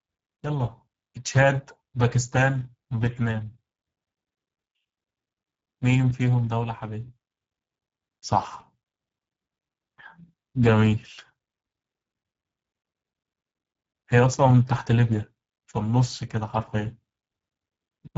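Throughout, the speech passed through the Speex codec at a low setting, which fits roughly 10 kbps, so it sounds plainly noisy and hoarse, with nothing above 7.7 kHz.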